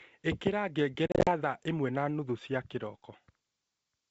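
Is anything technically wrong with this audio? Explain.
Yes. From 1.07 to 1.31 s there is packet loss on an ADPCM call: silent holes totalling 140 ms, each at most 40 ms long. The decoder's predictor desynchronises, so sound resumes slightly distorted, unlike clean dropouts.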